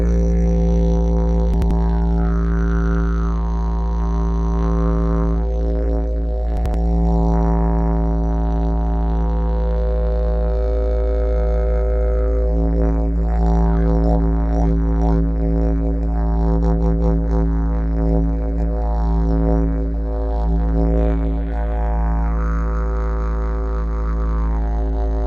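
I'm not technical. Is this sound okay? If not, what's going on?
No. There are two brief glitches, at 1.54 to 1.71 s and 6.57 to 6.74 s. Both are chunks out of order. A small piece of sound, about 85 ms long, plays one slot too late. Nothing goes missing, but that moment sounds jumbled.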